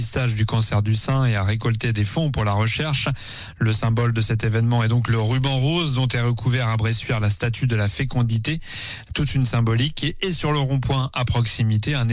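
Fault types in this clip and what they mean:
No faults heard.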